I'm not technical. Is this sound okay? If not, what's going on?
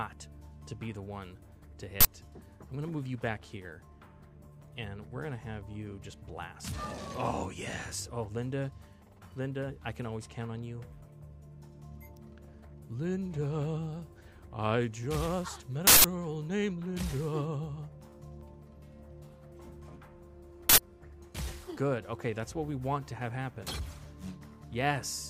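No. There is an uninitialised buffer fault three times: at 2.01 to 2.05 s, 15.87 to 16.04 s, and 20.69 to 20.78 s. Each time, the playback system sent out a chunk of memory before any sound had been written into it, so random leftover data played as noise. The bursts last about 43, 171 and 85 milliseconds, which fits chunks of 2048, 8192 and 4096 samples.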